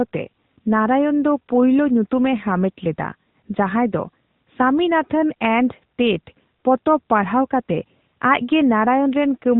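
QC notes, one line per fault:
Throughout: AMR narrowband mobile codec. Speech is band-limited with nothing above 4 kHz, which fits 8 kHz sampling. It has a plainly audible buzzy, synthetic edge from pulse-excited vocal-tract modelling in 20 ms frames, consistent with a mid-rate mode around 10.2 kbps.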